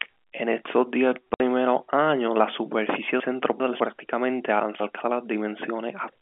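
At 1.34 s, after "estos diez", a 60 ms gap of silence cuts the speech. This is packet loss filled with silence, which fits three lost 20 ms packets.

From 3.2 to 3.8 s, after "años la superficie", chunks play out of order. A 200 ms chunk arrives two chunks late, so the sound jumbles. From 4.6 to 5.0 s, another 200 ms chunk plays one chunk late, with the same garbled effect. All of this sits within the narrow 200 Hz to 3.5 kHz telephone band of the G.711 line.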